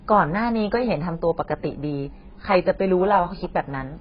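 Likely heavy AAC compression, starved at a bitrate around 12 kbps, runs throughout: nothing survives above 5 kHz, so the speech sounds dull, smeared and warbling.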